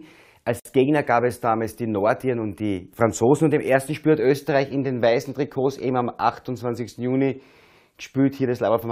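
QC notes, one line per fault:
0.60–0.65 s, gap at a join of encoded pieces: two separately encoded segments were butted together without trimming the encoder's leading delay or final-frame padding, so a 56 ms gap cuts into continuous sound, its edges smeared by the codec so the silent part is shorter, before the sound resumes where it stopped.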